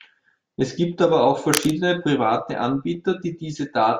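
From 1.53 to 1.71 s, right after "gibt aber auch", cable scratch noise crackles over the speech, only slightly quieter than it. This is likely a worn connector or lead being moved and its contact flickering. The waveform shows dense, ragged spikes, and the spectrogram shows broadband vertical smears.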